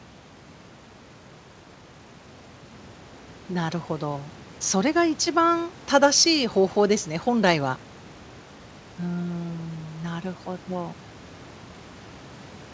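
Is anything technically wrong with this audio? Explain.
No, the speech sits about 20 dB above the room's background noise, and the call path with its G.722 codec at 64 kbps passes nothing above 8 kHz, which is that codec's normal band limit.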